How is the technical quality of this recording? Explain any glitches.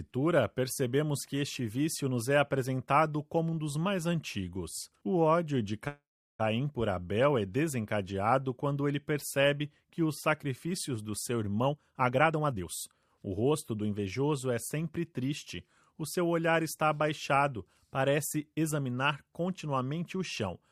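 Two glitches stand out in the recording.

At 5.87 s there's a call audio freeze lasting about half a second (519 ms). The last sound is stretched into a fading buzz or hiss, then about 370 ms of silence, and the audio resumes where it left off. Nothing seems lost, just delayed. The likely cause is packets held up until the jitter buffer ran dry.

From 11.66 to 14.06 s comes a jitter buffer speed-up. The receiver trims tiny pitch-period slices over and over to cut the built-up delay, so the sound plays about 22% faster (122% speed) at unchanged pitch, feeling rushed. Roughly half a second gets dropped.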